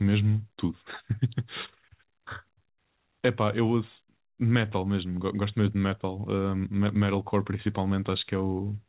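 Nothing goes wrong anywhere in this speech; it just comes through a call connection whose sound stops at 4 kHz, which fits a classic narrowband telephone codec like G.711.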